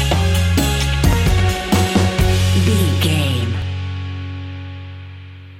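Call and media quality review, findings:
Audio missing between chunks, 1.13 s and 3.62 s. Two brief skips about 2.5 s apart, each dropping only a few milliseconds, with the audio on either side butted together and no gap of silence. Likely cause: the recorder or processor handling audio in 2.5 s blocks and losing a sliver at each handover while one block closes and the next opens.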